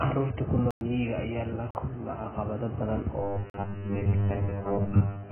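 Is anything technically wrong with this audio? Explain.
Yes. The whole clip sounds dull and smeared, with nothing above 3.1 kHz and a warbly texture. This is likely heavy AAC compression, which fits a very low bitrate of around 8 kbps.

There are three blocks of digital silence, where the sound cuts out abruptly. The first is at 0.71 to 0.81 s (104 ms). The second is at 1.71 to 1.75 s (43 ms), just before "kulma caqabado badan". The third is at 3.50 to 3.54 s (43 ms). In each, samples were zeroed, and the two shorter gaps fit a 2048-sample buffer.

There is also robotic sound from repeated short buffers. From 3.22 s, just after "la kulma caqabado badan", to the end, the sound becomes a rigid metallic buzz at 100 Hz. The likely cause is a 10 ms chunk being repeated while fresh audio is skipped.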